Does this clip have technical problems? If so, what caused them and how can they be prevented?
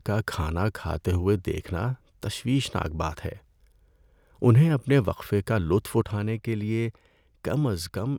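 Yes. At 6.01 s the level drops by about 4 dB in a single step and stays down to the end. Background noise falls together with the speech, with no ramp, unlike a fade or compressor. The likely cause is a sudden gain jump from an unramped digital gain change. Applying gain changes with a short smoothing ramp prevents this.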